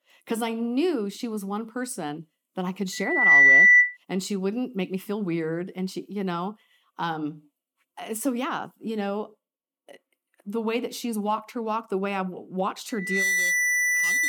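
Loudspeaker feedback squeal hits at 2.92–3.97 s and from 12.89 s to the end: the microphone re-amplifies its own loudspeaker at 2 kHz. Unlike a steady interfering tone, it swells over roughly 0.4 s, first well above the speech, later only slightly.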